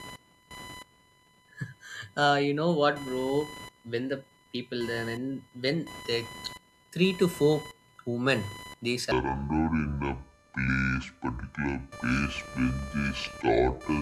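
Computer activity noise runs throughout. A buzzing, chirping scratch pulses at around 1 kHz, about 20 dB below the speech, following machine load rather than the talker.

From 9.12 s to the end, the section at the wrong speed plays at 0.589 times normal. Speech turns slow and deep, about ten semitones down, likely from a clock mismatch.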